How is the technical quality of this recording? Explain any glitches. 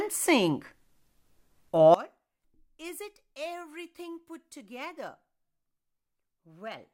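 The recording has one serious fault. From 1.94 s to the end, the speech drops by about 22 dB to a faint residue, likely one channel inverted cancelling centred content when summed to mono.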